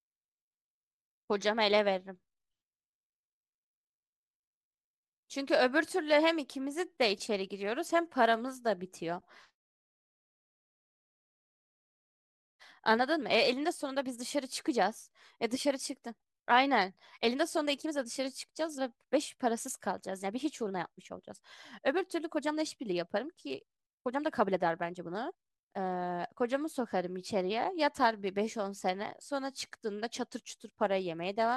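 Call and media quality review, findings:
Nothing to flag on this speech recording; no faults turned up anywhere in it.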